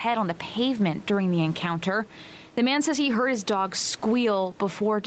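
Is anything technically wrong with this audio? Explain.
Yes. Gain pumping runs through the whole speech clip. The room noise sits about 29 dB below the speech. The swing is roughly 10 dB. The likely cause is input gain set far too high, with a fast limiter pulling it down. Loud and soft parts sit close together, and the speech sounds squashed.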